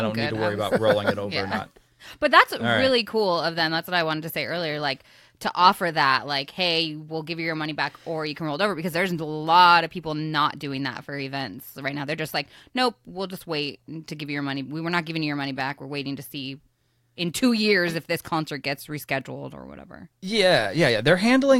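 Nothing stood out on listening to this speech recording.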